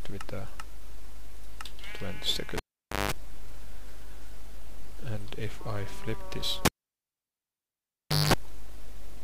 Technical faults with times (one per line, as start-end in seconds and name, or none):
2.57-3.12 cable pulled and plugged in
6.65-8.34 cable pulled and plugged in